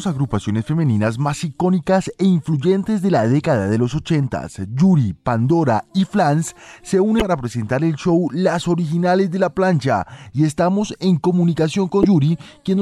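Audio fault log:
7.17–7.22 s and 12.01–12.05 s, damaged data in a compressed stream: brief corrupted bursts. The decoder misreads frames, loses sync, and emits a short glitch before recovering.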